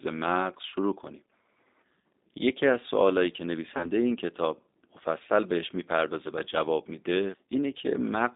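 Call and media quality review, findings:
G.729 codec, throughout. Speech band-limited to roughly 250 Hz to 3.7 kHz, with plainly audible rough, synthetic texture from filter-plus-pulse reconstruction. The sound points to G.729A at 8 kbit/s on the call leg.

VoIP packet loss concealed by the speech codec, at 2.00–2.03 s and 3.77–3.91 s. Each is roughly 30 ms of lost audio, consistent with a single packet. The decoder extrapolates the last pitch and filter, producing a brief fading smear. At 3.77 s the weakened, distorted audio persists beyond the gap.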